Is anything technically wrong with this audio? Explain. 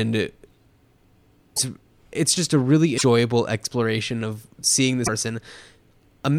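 Yes. The speech jumps and glitches three times: at 1.56 to 1.59 s, 2.97 to 3.02 s, and 5.06 to 5.09 s. Each event lasts only a few tens of milliseconds, about one or two 26.1 ms frames. The sound skips ahead at each cut. The likely cause is a broken MP3 bit reservoir. Frames were lost, so the frames after each cut looked back for borrowed data and decoded the wrong bytes.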